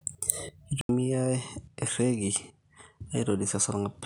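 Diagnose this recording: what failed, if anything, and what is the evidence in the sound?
At 0.81 s the recording goes silent for 80 ms, and from then to the end of the speech it is duller. Nothing remains above 11 kHz, the level sits about 5 dB lower, and a new noise floor roughly 50 dB under the signal appears. This points to the input being switched to a poorer device, likely at the driver level. A codec bandwidth drop would narrow the band without the gap, the level step or the different background noise.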